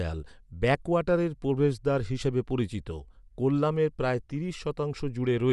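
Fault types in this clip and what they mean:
Bluetooth LC3 compression: throughout the speech there is a plainly audible breathy, grainy edge and nothing above 11.6 kHz, likely from LC3 coding at a rate fitting about 48 kbps with 10 ms frames. Unlike a plain low-pass filter, the remaining top sounds noise-filled rather than cleanly dulled.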